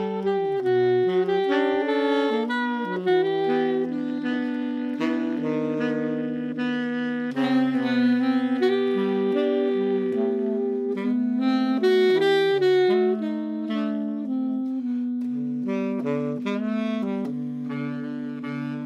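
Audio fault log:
No faults detected on review; nothing to log.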